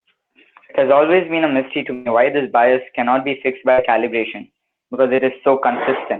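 A burst of packet loss at 1.93 to 2.07 s, after "been a mystery to", leaves about 120 ms missing, filled by extending and fading the last sound. A second burst at 3.71 to 3.80 s, after "bias cannot be fixed", patches about 60 ms the same way before "calibration because" resumes. At 5.16 to 5.20 s, short concealed packet loss drops roughly 20 ms. The receiver's brief synthetic continuation, blended back in, is heard as a quick smear just after "calibration because".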